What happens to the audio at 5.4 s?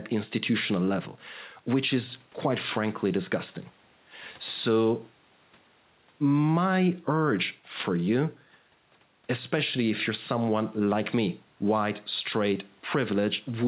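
Nothing goes wrong at 5.4 s: the speech carries on intact through the telephone-band call path, with no dropout, glitch or other fault at that point.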